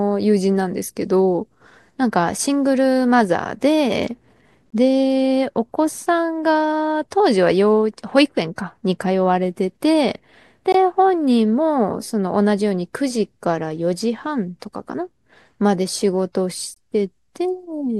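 Gap between chunks at 4.70 to 4.72 s, 10.72 to 10.74 s and 16.74 to 16.76 s in this speech clip: each is a 20 ms hole of silence, recurring every 6.0 s. That steady spacing points to audio delivered or stored in 6-second chunks, with silence inserted at each join, likely from codec padding or a player starting each chunk late. Nothing is lost from the speech itself. It is interrupted at every join.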